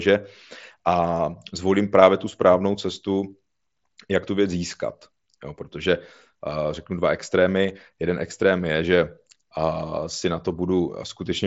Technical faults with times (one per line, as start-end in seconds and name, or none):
none